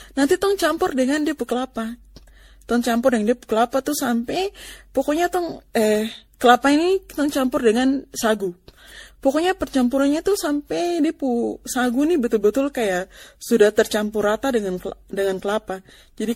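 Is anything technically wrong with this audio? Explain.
Yes. Generation loss runs through the whole clip. The speech sounds swirly and hollow, and consonant attacks are smeared. Nothing is present above 16.5 kHz. The likely cause is repeated lossy coding, with the audio decoded and re-encoded as MP3 about ten times. The artefacts are heavier than a single pass would leave, which fits a 64 kbit/s MP3 chain. Each new pass quantises on a shifted frame grid. Noise and spectral gaps pile up with every generation.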